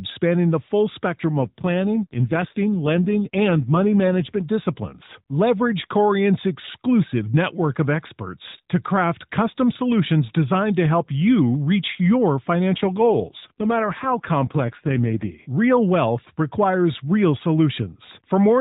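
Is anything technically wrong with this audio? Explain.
Yes, two AMR rate drops: from 1.37 to 4.44 s, after "spanning the full spectrum", and from 12.78 to 15.30 s, after "help you reach your". The codec falls to a lower mode, consistent with about 5.9 kbps down from 12.2 kbps, trading bits for error protection, so the speech turns buzzier and more synthetic. Unlike a dropout or band narrowing, there is no gap and the same 4 kHz ceiling holds.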